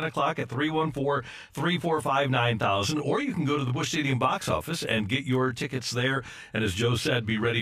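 Speech clip with channel delay (comb filtering) throughout. One channel arrives around 20 ms late, and summing to mono cancels shared content at closely spaced frequencies, with notches from roughly 20 Hz upward. The result is a rough, slightly doubled quality on the whole recording.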